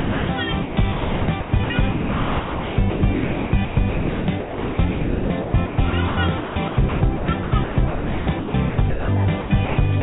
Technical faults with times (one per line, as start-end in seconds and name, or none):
0.00-0.29 sound dropped by the voice detector
0.62-9.08 sound chopped by the voice detector
9.41-10.02 sound chopped by the voice detector